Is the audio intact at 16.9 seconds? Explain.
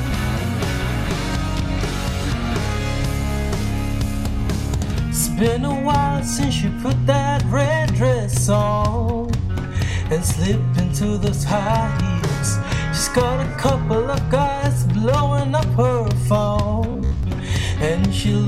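No. From 16.92 to 17.23 s the sound breaks into robotic sound from repeated short buffers. A rigid, metallic buzz at about 66.7 Hz sets in. That pitch matches a repeat every 15 ms. The likely cause is fresh audio arriving too slowly. The playback fills the gap by looping the last short slice while the real audio is skipped. Roughly 70 percent of the span is repeated material. The loop's fixed rate imposes that steady buzz.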